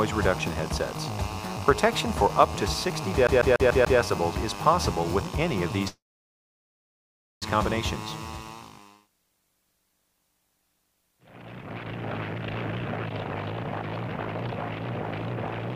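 A CD stuck on one turn runs from 3.27 to 3.99 s: the same 145 ms slice of audio plays five times in a row, with a brief mute at each jump, giving the rapid, even stutter of a skipping disc. A scratch at that spot knocks the laser back one track on every rotation, so the loop length matches a single turn of the disc. A call audio freeze follows from 5.88 to 7.44 s. For about 1.54 s the last sound is carried on only briefly before the audio falls to silence for about 1.43 s. Then the sound resumes where it stopped, so nothing is lost, and everything afterward runs about 1.54 s late. The likely cause is packets delayed in transit, leaving the receiver's jitter buffer empty until they arrived.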